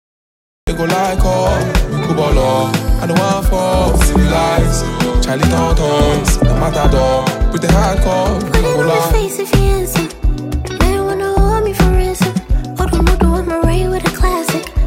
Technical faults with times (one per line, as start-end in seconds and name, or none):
0.00-0.67 cut-off start